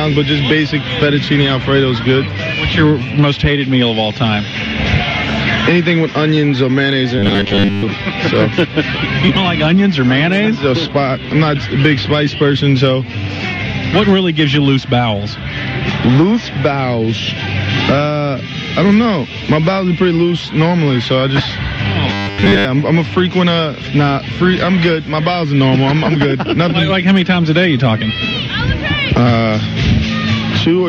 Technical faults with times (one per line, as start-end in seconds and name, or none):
7.19-7.84 robotic sound from repeated short buffers
22.13-22.65 robotic sound from repeated short buffers